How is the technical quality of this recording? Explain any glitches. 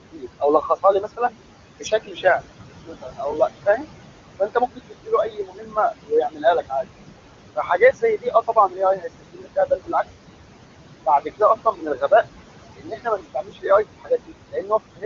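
The recording is held back by an overactive noise suppressor that both colours the background and eats into the speech itself.

Noise suppressor artifacts run through the whole clip. The room noise, which sits about 10 dB below the speech, drops away between phrases and swells back under them. The suppressor estimates the steady noise in each frequency band and pushes those bands down frame by frame, here by about 20 dB.

Speech cut by the noise suppressor occurs in eight stretches: 0.00 to 1.34 s, 1.79 to 2.25 s, 2.87 to 3.35 s, 3.66 to 3.89 s, 4.39 to 6.85 s, 7.56 to 9.94 s, 11.06 to 12.12 s, and 12.77 s to the end. Within each one, parts of the speech sound swallowed or suddenly faint, dropping by about 18 to 22 dB. The longest stretches lose around a second of speech in total, and the shortest lose only a brief moment. The suppressor has mistaken quiet speech energy for noise and turned it down along with the background.

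The audio band stops a little above 7 kHz, which fits wideband telephone coding at a high rate.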